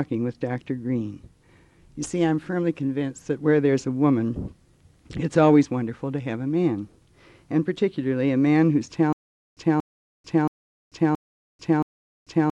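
From 9.13 s to the end, the audio breaks into a stutter with silent gaps: a 233 ms fragment repeats five times, each followed by about 441 ms of digital silence, a 674 ms cycle. This is likely a stalled player or stream replaying its last buffered fragment on each retry, so the intended audio never arrives.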